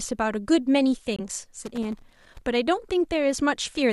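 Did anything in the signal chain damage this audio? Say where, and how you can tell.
Yes. The first fault is a corrupt frame muted at the codec decode stage. From 1.16 to 1.21 s the speech drops to dead silence for about 42 ms, a gap that fits a single codec frame. The decoder rejected a frame whose bits had been damaged, and the player filled its slot with silence. The waveform shows a flat line with sharp vertical edges. The spectrogram shows a clean full-band blank column, and the timing on either side is unchanged.

The second fault is loose connector crackle in the analogue wiring, from 1.64 to 2.46 s. A worn or dirty contact was making and breaking rapidly, chopping the signal and producing an irregular burst of crackle and scratching. On the waveform this appears as jagged dropouts and spikes scattered unevenly over those 0.8 s. The spectrogram shows clusters of thin broadband vertical streaks at irregular spacing, not the single clean gap left by the codec fault.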